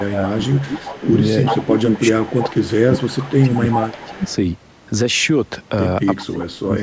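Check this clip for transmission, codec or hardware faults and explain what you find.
Two faults stand out, both tied to the call's echo control rather than to a codec or hardware: the talker is pushed down while the other side is active, and a delayed copy of the voice leaks back in.

Speech suppressed in double talk, 0.00–1.07 s, 1.49–4.26 s and 6.17–6.83 s: the voice sinks sharply, by roughly 20 dB and close to 25 dB near the end, thinning and dropping out in pieces. This is likely the echo canceller failing to tell the local talker from loudspeaker echo while both sides talk at once. It then attenuates everything, near-end speech included.

Echo leak, 0.40–1.24 s, 1.44–2.75 s, 3.17–4.36 s and 6.40–6.45 s: a ghostly repeat of the voice trails it by about 377 ms. It is loudest around 1.4–2.8 s, only about 5 dB under the speech, and fainter elsewhere, down to roughly 20 dB below at the final scrap. 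The cause is likely a loudspeaker on one end whose echo canceller left part of the microphone pickup in place, so the voice returns late.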